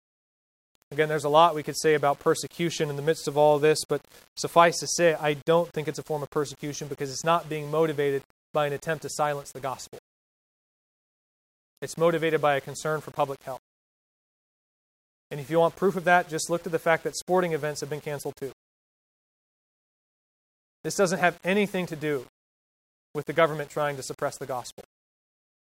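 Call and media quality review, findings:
Grainy, signal-following distortion on speech, whole clip. Quiet syllables and decays turn gritty; faintest tails sputter or cut to silence. Likely cause: low bit depth without dither, an 8-bit path rounded, error around 30 dB below signal. Spectrogram: broadband haze appearing only under speech, gone in pauses. Waveform: visible stair-steps on low-level passages.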